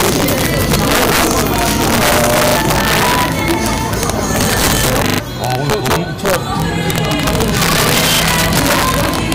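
Integer overflow runs throughout: the signal is driven about 9 dB past full scale, and a small fraction of peaks wrap to the opposite sign, producing sharp cracks on loud passages. Repeated buffer faults occur at 2.48 s, 5.08 s and 8.16 s, where a 40 ms block replays two, three and one extra times as delivery stalls, heard as brief hard-edged stutters.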